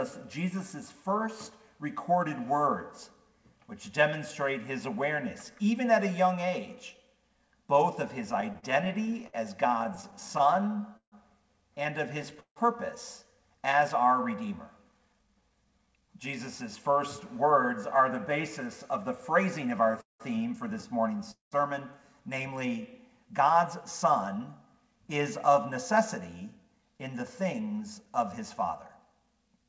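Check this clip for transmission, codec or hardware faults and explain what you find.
Yes, there are several network-timing faults, all from packets reaching the receiver unevenly. The sound is band-limited at 8 kHz, which fits a G.722 call path at 64 kbps.

Repeated stalls (stutter) occur from 8.32 to 11.14 s, 12.23 to 12.58 s, and 19.83 to 20.22 s. Packets arrived late, so the jitter buffer kept running dry, and the receiver stretched the last sound to cover each gap. The first span has 19 small gaps totalling about 0.4 s. The later two each have three gaps, with the longest lasting 160 and 187 ms. Nothing is lost, but the audio catches and drags.

Jitter buffer speed-up runs from 14.45 to 17.70 s at 108% speed, and again from 24.66 to 29.65 s at 106%. After delayed packets arrived together the buffer held more than its target, so the receiver trimmed tiny pitch-length slices over and over, roughly a third of a second in each stretch. 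The pitch stays the same while the pace quickens noticeably, giving a hurried, pressed-forward feel.

A call audio freeze hits at 21.31 to 21.54 s, likely caused by packets held up in transit that emptied the buffer. The receiver filled about 205 ms, first extending the last sound and then fading to about 140 ms of silence. When the audio resumes, it carries on from where it stopped. The result is an inserted hole rather than a skipped piece, and everything after it is shifted about 205 ms later.

Jitter buffer slow-down follows from 22.54 to 22.83 s. With the buffer running low, the receiver repeated single pitch periods to rebuild a reserve, adding 46 ms and dropping the pace to 87%. The pitch is unchanged, but sounds in this span are drawn out and slightly sluggish.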